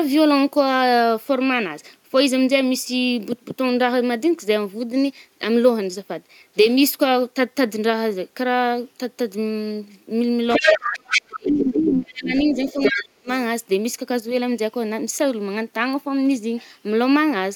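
Speech, with a second voice breaking in from 10.49 to 11.39 s and from 12.26 to 13.0 s. It is about as loud as the main talker. This is other side's voice leaking through, likely loudspeaker echo the canceller missed. The main voice also drops away, by about 20 dB from 10.59 to 11.11 s and by about 35 dB from 11.29 to 13.29 s. This is speech suppressed in double talk, likely the canceller turning everything down while both sides spoke.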